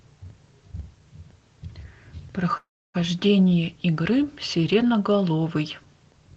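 At 2.57 s the speech stops and the gap is filled with sound for about 0.37 s, to 2.96 s. This is a call audio freeze. Briefly, the last sound carries on and fades, then drops to silence for about 0.27 s. The likely cause is packets stalling in transit so the jitter buffer ran dry. When delivery resumed, the speech continued where it had stopped. Nothing is lost, but everything after it plays about 0.37 s later. The band limit near 8 kHz across the clip fits the Opus codec on the call path.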